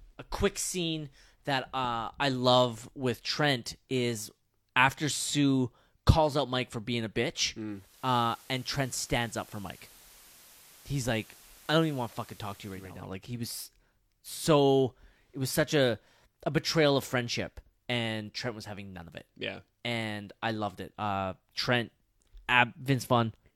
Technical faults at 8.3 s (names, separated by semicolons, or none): digital radio blending to analogue